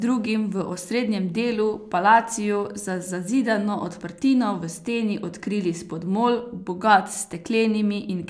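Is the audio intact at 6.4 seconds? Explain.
Yes, at 6.4 seconds the speech plays through cleanly, with no dropout, click, distortion or other audible fault at that moment.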